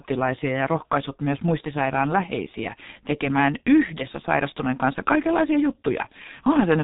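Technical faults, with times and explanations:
Throughout, G.723.1 codec: the speech is heavily damaged, muffled and hoarse, with nothing above 3.8 kHz and consonants smeared together. The coder rebuilds the voice from a sparse model updated only once per 30 ms frame, so quick changes blur, and the thin, gritty texture fits a bitrate around 6 kbit/s. A simple low-pass filter would dull the top end just as much but leave the voice smooth and the consonant timing intact.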